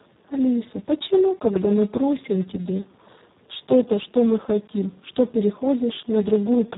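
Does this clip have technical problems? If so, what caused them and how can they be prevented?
Yes. The speech carries Speex codec damage throughout. It sounds hoarse, buzzy and close to robotic, and nothing is present above 3.8 kHz. Speex is a CELP coder that models the vocal tract and spends its remaining bits on the excitation signal. The heavy degradation fits one of its lowest-quality modes, around 4 kbps, where the excitation is too coarse and the output approaches a vocoder. To prevent this, capture or transmit at a higher Speex quality setting, or use a modern codec such as Opus.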